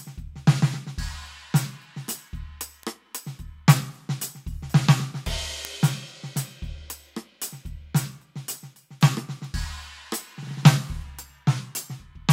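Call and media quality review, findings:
Bit error spike: single-sample ticks at 2.83, 5.65 and 9.45 s in the music. Broadband, unrelated to the material, no decay, so one flipped bit in a memory or digital-link word, not a dropout or codec transient, which would disturb surrounding audio.

Drift correction step: playback slows about 5.8% from 11.04 to 11.95 s, pitch drops 103 cents, then snaps back. Speed and pitch move together in one step, unlike wow or gradual drift; likely a clock-matching resampler adjusting buffer fill.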